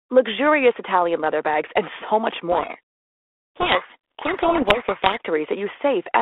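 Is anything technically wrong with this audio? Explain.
Yes. From 2.52 to 5.21 s there is a codec payload misread. The decoder takes each G.726 code word with its bits in the wrong order. The speech is buried in harsh distortion.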